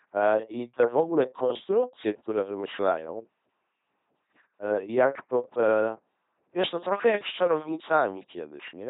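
LPC-10 vocoder damage runs throughout the speech. Each moment is resynthesised through a ten-pole filter fed by either a buzzing pulse train or noise, giving a heavily mechanical, robotic voice with misplaced buzz or hiss, nothing above 3.9 kHz, and a coarseness that fits 2.4 kbit/s.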